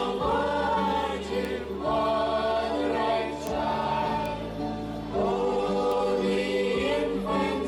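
Bit error spikes at 1.45, 3.47, 4.26 and 5.92 s: a single flipped bit in one sample jumps the value, giving sharp broadband ticks peaking around -17 dBFS, about -11 dBFS at 3.47 s.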